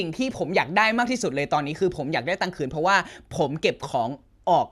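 No technical faults heard.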